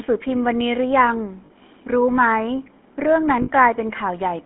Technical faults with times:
0.00-4.45 GSM full-rate codec
1.46-1.51 lost GSM frames
3.42-3.49 lost GSM frames

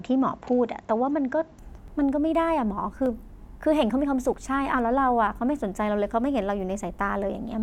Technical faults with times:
0.00-1.59 input switched to a poorer device
1.88 dropped buffer (overrun)
3.06 dropped buffer (overrun)
4.34 dropped buffer (overrun)

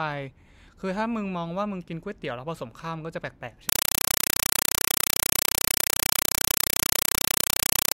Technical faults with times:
3.69-7.95 compressed stream played as audio

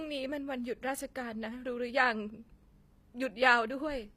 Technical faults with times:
0.00-4.16 HE-AAC compression

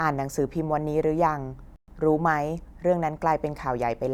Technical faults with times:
1.76-1.88 playback stall

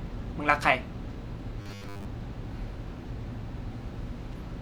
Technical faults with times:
1.62-2.05 robotic sound from repeated short buffers

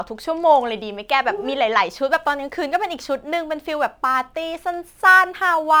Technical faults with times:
2.10-5.80 crude rate conversion

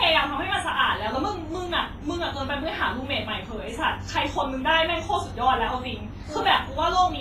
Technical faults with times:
0.00-7.21 WMA compression

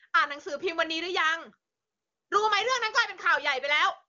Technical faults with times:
none

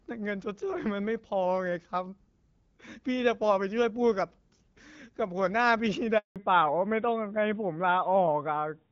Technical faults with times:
6.18-6.36 handover gap
6.36-8.92 fallback to narrowband

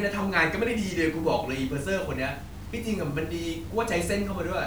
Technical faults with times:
0.00-4.67 low bit depth without dither

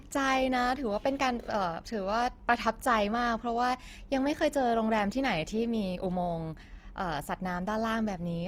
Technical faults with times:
0.00-8.48 Opus compression

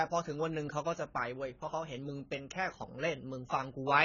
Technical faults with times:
0.00-4.04 AAC compression

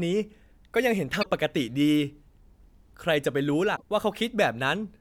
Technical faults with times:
1.19-1.26 damaged data in a compressed stream
3.72-3.82 damaged data in a compressed stream

